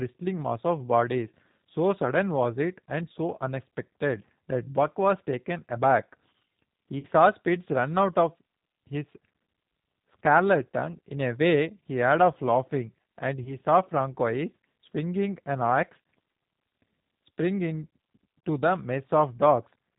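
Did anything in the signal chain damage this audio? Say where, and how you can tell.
Yes. At the codec stage, the speech runs through G.729, here the G.729A variant at 8 kbit/s. The damage is plainly audible for the whole clip. Nothing above 4 kHz survives, so sibilants and breath lose their edge. The voice has a rough, slightly synthetic grain because the decoder rebuilds it from a vocal-tract filter, a pitch predictor and a handful of pulses per 10 ms frame rather than from the actual waveform.

At the network stage, VoIP packet loss concealed by the speech codec occurs twice. Around 6.99 s about 40 ms of audio went missing, which fits two 20 ms packets. The disturbance runs to about 7.06 s. Around 13.44 s about 20 ms was lost, consistent with one packet, with the effect lasting to about 13.57 s. In each gap the decoder extends its last pitch and filter while fading the gain. Because every frame builds on the previous one, the sound stays weak or distorted past the lost span.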